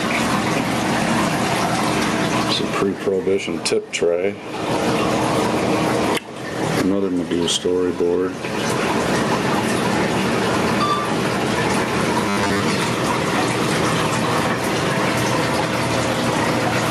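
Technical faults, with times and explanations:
Throughout, gain pumping: the level drops sharply the moment a loud sound arrives, a swing of about 20 dB. This is likely input gain set far too high, with a fast limiter or compressor clamping down on each peak, so loud and quiet passages sit close together and everything sounds squashed. On the waveform the envelope looks flattened against a ceiling.
12.29 to 12.62 s, robotic sound from repeated short buffers: for about a third of a second the audio turns into a rigid, metallic buzz at 100 Hz that only loosely tracks the underlying sound. The likely cause is new audio arriving too late, so the software loops the last short fragment, which fits a 10 ms buffer. Most of the real signal in this stretch is skipped. A spectrogram shows evenly spaced harmonic lines at multiples of 100 Hz, and the waveform shows one short shape repeating.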